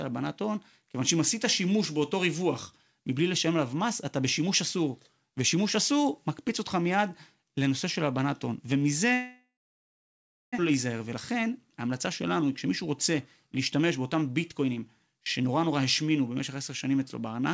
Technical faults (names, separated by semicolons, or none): long network dropout; jitter buffer speed-up